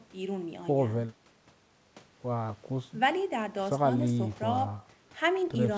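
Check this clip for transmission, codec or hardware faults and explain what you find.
Nothing here points to a transmission, codec or hardware problem: the speech comes across just as you'd expect from a wideband call path, with the top end stopping at about 8 kHz in the way a G.722-style call codec shapes it.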